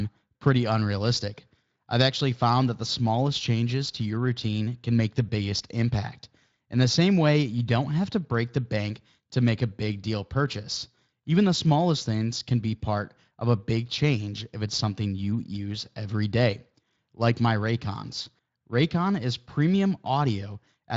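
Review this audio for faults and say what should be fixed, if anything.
Nothing here needs fixing: the speech comes through Speex at its wideband setting with no faults to chase down.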